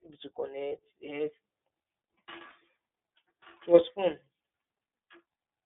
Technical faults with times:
0.00-5.66 iLBC codec
0.68-0.72 lost iLBC frames
2.48-2.52 lost iLBC frames

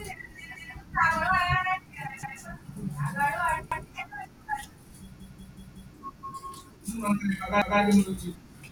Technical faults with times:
0.56-0.74 repeated buffer
2.23-2.41 repeated buffer
3.72-3.90 repeated buffer
5.20-5.94 repeated buffer
7.62-7.80 repeated buffer

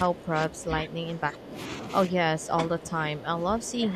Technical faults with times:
0.03-1.58 speech suppressed in double talk
2.07-3.96 speech suppressed in double talk

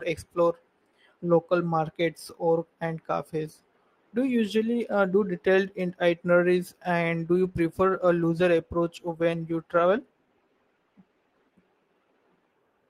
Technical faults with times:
7.37-11.59 call bitrate drop

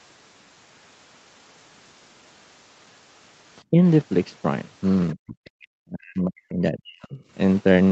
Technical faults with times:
3.71-3.78 speech suppressed in double talk
5.14-7.18 speech suppressed in double talk

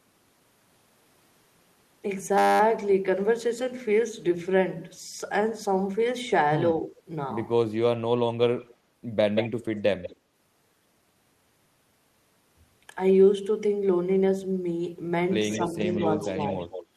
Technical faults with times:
6.81-6.94 speech suppressed in double talk
8.60-8.76 echo leak
9.35-10.16 echo leak
15.50-16.85 echo leak
15.57-16.37 speech suppressed in double talk

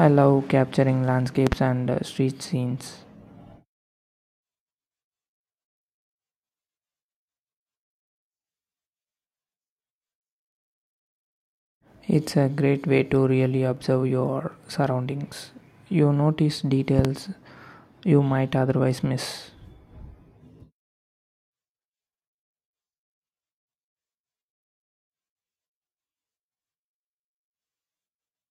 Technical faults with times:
1.47-1.55 loud pop
16.99-17.07 loud pop

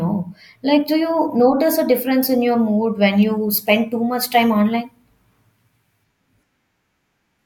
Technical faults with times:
none

